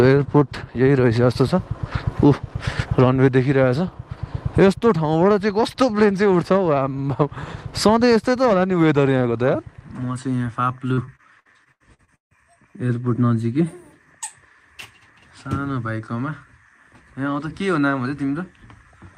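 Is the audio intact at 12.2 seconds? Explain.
No. At 12.2 s the audio is inside repeated packet loss from 10.93 to 12.33 s: nine gaps patched by extending prior sound, giving choppy, robotic audio.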